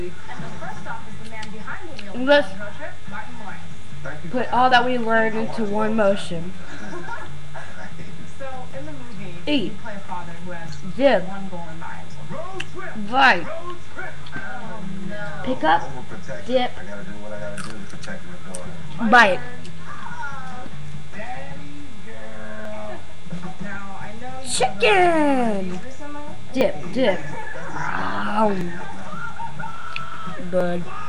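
From 0.73 s through to about 30.6 s there's a steady run of periodic USB or driver dropouts, one every 1.99 s, roughly fifteen of them in all. Something in the background is tying up the bus or the audio driver on a fixed schedule, and each time around 10 ms of audio just gets skipped rather than padded with silence. You hear it as evenly spaced ticks or little pops, and they only show up where there's signal to interrupt.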